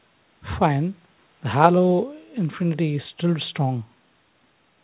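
No technical faults are audible anywhere in the recording.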